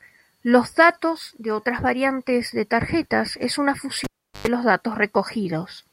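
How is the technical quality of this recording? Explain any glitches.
The recording has one clear glitch, near the end of the speech. From 4.04 to 4.48 s the cable is pulled and plugged in: a pop, about 386 ms of near silence, within which comes about 111 ms of 50 Hz mains buzz as only the plug tip touches, and a second pop as the sound returns. The hum burst and the paired pops set it apart from a simple dropout.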